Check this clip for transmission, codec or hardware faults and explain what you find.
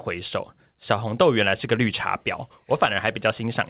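No transmission, codec or hardware faults turn up in this speech. It has come through a working call path, with nothing above 4 kHz, which fits a narrowband codec such as G.711 mu-law at 64 kbps.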